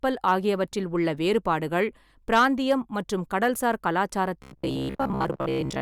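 At 0.27 to 0.33 s, just before "ஆகியவற்றில் உள்ள", the speech peaks exceed what a stage in the chain can pass, overdriving it by about 2 dB. Those peaks are cut flat, and this brief hard clipping comes across as a short crackle. From 2.33 to 2.72 s the overload is deeper, about 5 dB, so the flattening lasts longer and adds a harsher fuzz over the loud syllables, with harmonics spraying high into the spectrum.

From 4.43 s to the end of the clip, new audio most likely reaches the output too seldom, and the gaps are filled by replaying the most recent 15 ms or so while most of the real signal is dropped. That repetition locks a steady buzz near 66.7 Hz onto the speech, the robotic sound from repeated short buffers. The voice becomes a stiff metallic drone that only loosely traces the syllables.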